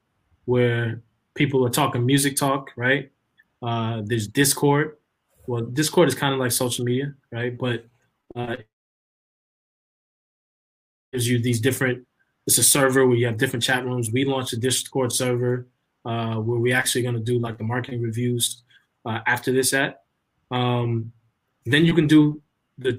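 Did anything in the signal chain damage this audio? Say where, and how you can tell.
Yes, at the network stage. From 8.21 to 8.59 s there is repeated packet loss, heard as choppy, robotic sound: six short holes, the longest 35 ms, each patched by extending the preceding audio, so roughly 37% of that span is synthetic fill.

Immediately after, from 8.61 to 11.15 s, about 2.5 s of audio is missing. A brief continuation of the last sound, as a fading buzz or hiss, gives way to near-silence, and the audio resumes without the lost section. This is likely a long network dropout, with no packets arriving during that interval.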